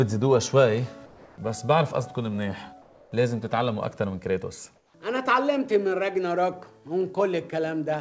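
Comfort noise in place of the background at 1.06–1.38 s, 2.82–3.12 s and 4.76–4.94 s: the real background gives way to a steady, featureless hiss about 2, 3 and 4 dB quieter, likely because the sender paused transmission and the receiver synthesised filler noise, all band-limited to 8 kHz by the call codec.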